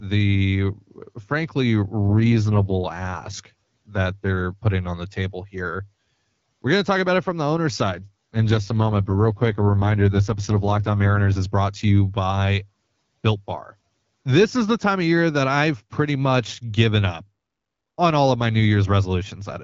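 From 2.08 to 3.34 s and again from 7.86 to 11.41 s, an AMR rate drop turns the speech rough and synthetic, which fits a switch from 12.65 to 6.6 kbit/s. Unlike a dropout or a bandwidth cut, there is no gap and the band stays full.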